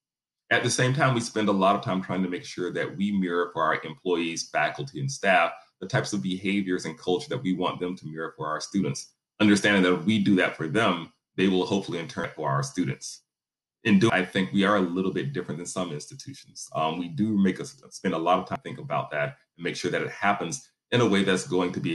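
Damaged data in a compressed stream shows up as three brief glitches, at 12.24 s, 14.10 s and 18.56 s. At each point corrupted bytes make the decoder misread or reject frames, lose sync and hunt for the next valid frame header, producing a chirp, squawk, click or short hole.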